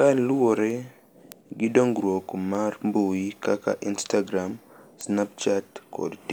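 Word clock ticks run from 0.70 s to 6.24 s: around ten sharp clicks land over the speech at a steady spacing of roughly 0.7 s. The receiving device was clocked independently of the digital link feeding it, so the two clocks drifted apart by something like 40 parts per million. Each time they slipped by a full sample, one sample was dropped or repeated, leaving a brief discontinuity that sounds as a regular tick.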